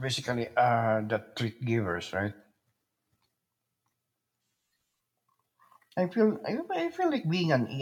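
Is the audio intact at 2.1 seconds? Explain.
Yes, the speech at 2.1 seconds is intact, with no dropout, click, distortion or other technical fault at that moment.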